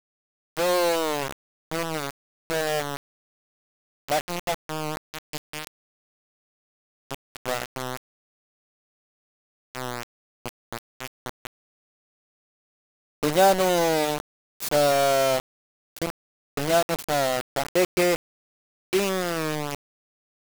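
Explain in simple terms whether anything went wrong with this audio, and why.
Something did go wrong, and it lasts from start to finish. The speech is coated in a harsh, grainy distortion that rises and falls with the voice, only somewhat quieter than the speech itself, and the quietest moments either go dead or crackle between two levels. The likely cause is low bit depth without dither: the audio was stored with only about 3 bits, so every sample was rounded to one of a handful of levels, and that rounding error follows the voice.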